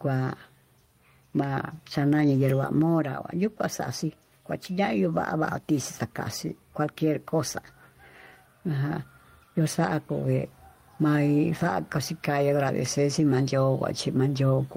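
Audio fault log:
throughout, gain pumping: the level ducks under each loud syllable, swinging around 10 dB, likely from excessive input gain driving a fast limiter.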